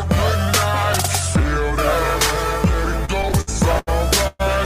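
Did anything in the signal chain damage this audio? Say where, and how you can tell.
Yes. A drift correction step runs from 0.48 to 1.22 s: speed rises 5.7% and pitch about 96 cents together, likely clock-matching software in the buffer stage.

Repeated stalls (stutter) run from 3.05 to 3.89 s: six gaps, longest 79 ms, filled by continued sound. Late network packets kept emptying the jitter buffer, dragging the audio without losing any.

A call audio freeze runs from 4.27 to 4.41 s: about 123 ms of continued, fading sound, then resumption where it stopped. Packets were likely held up on the network.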